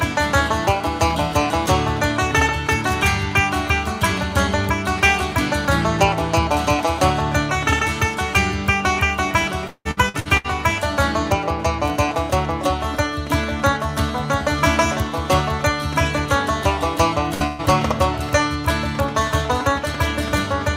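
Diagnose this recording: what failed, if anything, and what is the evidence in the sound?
Repeated packet loss (robotic sound) hits the network stage from 9.67 to 10.47 s: five gaps, the longest 177 ms, patched by extending prior sound, so about half the span is synthetic. Unlike an isolated burst, the holes recur closely, giving choppy texture with pieces missing.

Two bursts of packet loss follow at 17.34–17.43 s and 17.46–17.62 s, losing about 60 and 120 ms. Each gap is filled by a fading continuation rather than silence, distinguishing it from a dropout, and the sound resumes later with material skipped.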